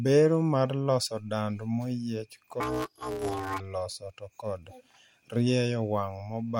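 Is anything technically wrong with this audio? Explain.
Yes. From 2.60 to 3.60 s, between "mar loso dand maoyiech" and "loso to kod", the speech turns into a robotic buzz at about 188 Hz. This is planar audio read as interleaved: 5.33 ms blocks, which fits 256-sample blocks, replay left then right at double speed.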